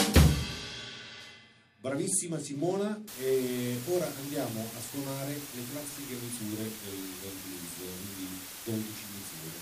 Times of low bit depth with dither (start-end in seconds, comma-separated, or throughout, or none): 3.08-9.62